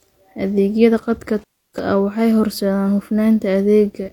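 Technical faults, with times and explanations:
1.39 to 1.79 s, intermittent contact: the speech cuts out for about 0.3 s with crackle at both edges, before "ah waxay horseedaan". A loose connection briefly opened.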